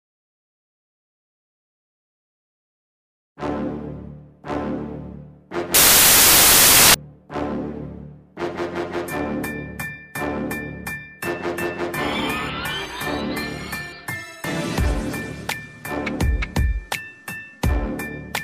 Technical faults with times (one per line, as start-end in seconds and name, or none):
5.74-6.94 samples built from the wrong bytes